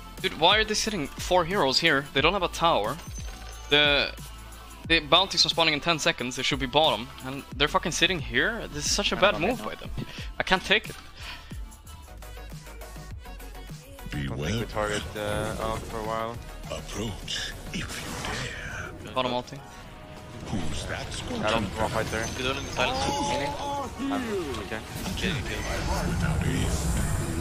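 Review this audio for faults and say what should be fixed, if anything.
At 21.85 s there is a small jump in the sound, as though a sliver of audio were cut out and the two edges butted together, with no gap of silence between them. This is likely a dropped buffer (overrun): the capture software failed to read its samples before the hardware overwrote them, so about 5 ms of audio was lost. Giving the recording process larger buffers and higher scheduling priority would prevent it.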